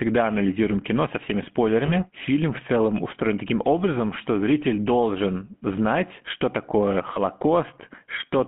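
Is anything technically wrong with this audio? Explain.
Yes. The whole clip has GSM full-rate codec sound, consistent with 13 kbps coding. It is band-limited to 150 Hz to 3.4 kHz. Pulse-driven vocal-tract modelling gives the speech a plainly buzzy, gravelly roughness.

Lost GSM frames occur at 1.86 to 1.92 s, after "анализируем кино со всеми", and at 7.14 to 7.18 s, after "должен знать что такое". Each fits one lost 20 ms frame. The decoder repeated the last good frame, leaving a brief rough, metallic ring.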